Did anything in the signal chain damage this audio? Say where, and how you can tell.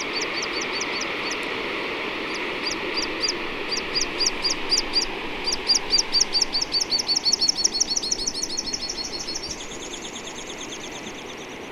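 No, nothing in the signal chain stood out on listening.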